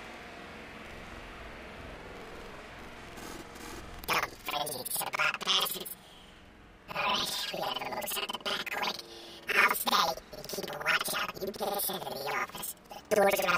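From start to finish the sound plays an octave high with a steady flutter near 10.8 Hz. This is planar audio read as interleaved. Each block of about 93 ms, which fits a 4096-sample block, plays twice at double speed, left channel then right.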